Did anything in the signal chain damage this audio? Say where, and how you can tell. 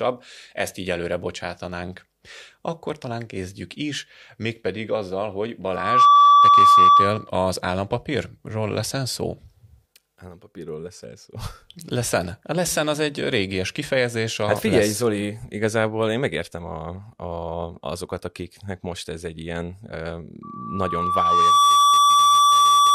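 Yes: loudspeaker feedback squeal, where the microphone hears its own loudspeaker with loop gain above one at 1.2 kHz. That tone swells over the audio from 5.69 to 7.3 s, after "is mégpedig azzal hogy", and from 20.43 s to the end.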